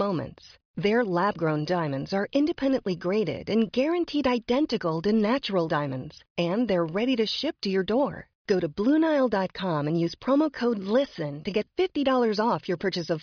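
No technical faults can be heard anywhere in this recording.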